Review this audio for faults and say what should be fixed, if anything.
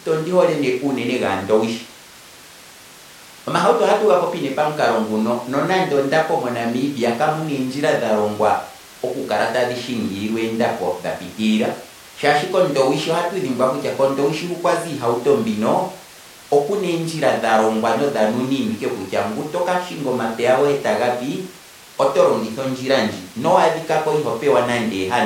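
Nothing stood out on listening, so there is nothing here that needs fixing.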